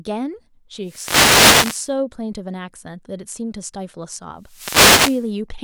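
Speech, interrupted twice by a wireless microphone noise hit, from 0.82 to 1.93 s and from 4.40 to 5.35 s. Each is a burst of static where the FM radio link fades as reflected signals cancel, letting receiver noise rise over the voice.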